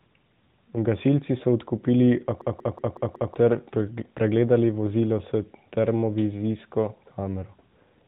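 From 2.42 s to 3.34 s a system hang loop occurs: the driver stalled while the hardware replayed its ring buffer, repeating one 186 ms slice five times at 5.4 Hz as a machine-gun stutter, consistent with an 8192-sample buffer, and about a second of speech is lost.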